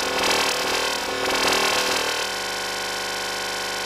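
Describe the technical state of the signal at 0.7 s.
At 0.7 s a doubled audio track is present, as it is for the whole clip: a second, full-band copy of the sound trails the original by roughly 0.4 s, about 5 dB quieter. It is most likely the same signal picked up again through a slower path and mixed back in. The copy carries no decay or room colour, so the sound at 0.7 s is overlaid with a clean, dry repeat of what played a moment earlier.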